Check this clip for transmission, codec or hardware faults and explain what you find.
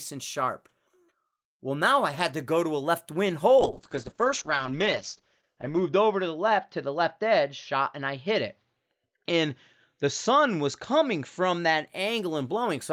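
One transmission fault is present: a call bitrate drop from 3.58 s to 11.93 s, just after "to a left wing". The encoder was forced onto far fewer bits, consistent with a fall from around 32 kbps to 8 kbps. Speech is coded coarsely and sounds rough and watery. Bandwidth narrows from 20 kHz to 8 kHz, muffling it, worst for about 2.3 s.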